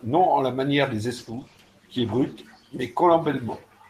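From 1.19 s to 3.23 s the speech turns rough and muffled, losing its high frequencies, worst for about 1.2 s. This is a call bitrate drop: the encoder was forced to code more coarsely, consistent with a fall from about 32 to 13 kbps.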